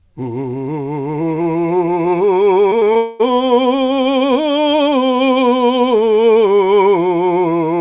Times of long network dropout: 2.97-3.21

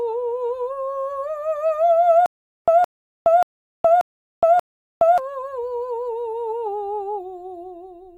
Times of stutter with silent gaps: 2.26-5.18

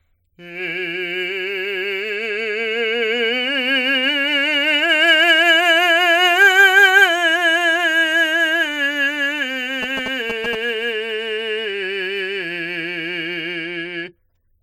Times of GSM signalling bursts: 9.83-10.55

